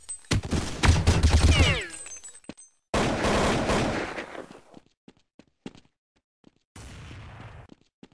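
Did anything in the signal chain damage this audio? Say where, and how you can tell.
No, nothing in the signal chain damaged this audio.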